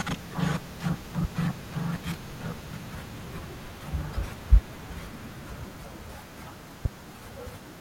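A sudden voltage step, likely from a switch, plug or static discharge, entered the chain twice, giving a loud pop at 1.24 to 1.27 s, about 10 dB above the speech, and another at 6.85 to 6.88 s, about 15 dB above. Each is a single sharp thump over speech that continues underneath.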